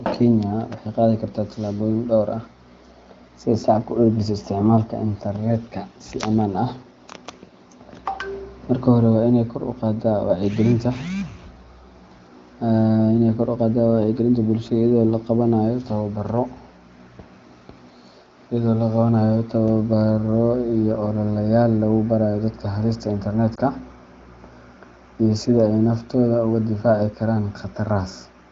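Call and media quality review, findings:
Lost AMR speech frames at 23.55 s: brief dip or warble in the speech, single 20 ms frame. Decoder concealment repeated last pitch and vocal tract settings at reduced gain.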